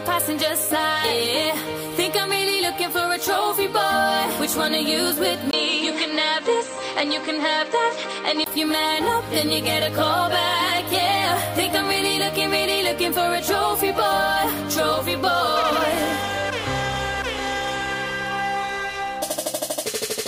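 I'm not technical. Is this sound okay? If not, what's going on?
No. From about 5.51 to 8.46 seconds the sound loses its top end, nothing above roughly 8.2 kHz, so it goes duller, with a new background noise sitting well underneath. There's a tiny 20 ms gap right at 5.51 s. Loudness stays about the same. That pattern most likely means the input switched to a poorer device partway through, like a different mic or a headset, before the original one came back at 8.46 s.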